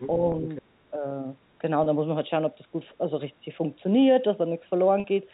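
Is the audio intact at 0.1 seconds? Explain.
No. The moment at 0.1 s sits right at the end of a short stretch of the other side's voice leaking through, which runs from 0.00 to 0.09 s. A second voice is audible under the main speech there, roughly 10 dB below it. The likely cause is an echo canceller that did not fully remove the far end's loudspeaker playback from the microphone pickup, letting that brief scrap of the other talker pass into the telephone-band G.711 signal.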